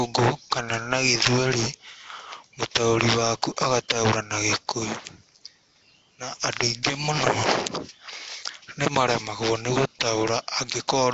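Nellymoser compression, likely, runs throughout this speech: a rough, hissy halo and underwater smear, nothing above 7.8 kHz, fitting a rate near 32 kbps with starved bands noise-filled. Pre-echo at 3.57 s, 3.89 s and 6.83 s (right after "na andũ") puts a hiss of about 12 to 14 ms before sharp attacks, because block-wide quantisation noise spills ahead of them.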